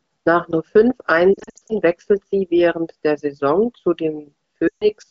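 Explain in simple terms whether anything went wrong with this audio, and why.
Yes, there are lost AMR speech frames. Between 1.34 and 1.75 s, after "nur fünf", the sound warbles and dips in short bursts, and again from 4.68 to 4.88 s it drops to near silence. The phone decoder is stretching and softening the last good sound instead of leaving hard silent gaps.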